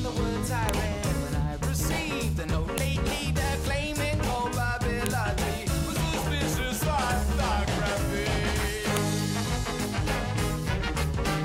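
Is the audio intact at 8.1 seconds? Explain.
Yes, at 8.1 seconds the audio runs on cleanly with no dropout, click, distortion or other technical fault.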